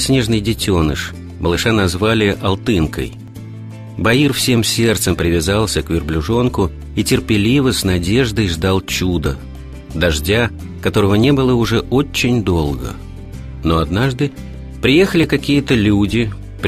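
Brief skips at 3.28, 9.26, 11.24, 13.26 and 15.24 s come from overlap between stream segments. Overlapping 2-second segment timestamps make the player discard 6 to 18 ms of audio, so the waveform jumps and each join sounds like a tiny skip.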